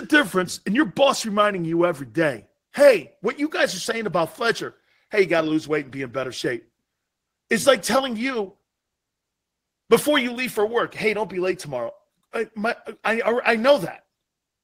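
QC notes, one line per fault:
No faults found.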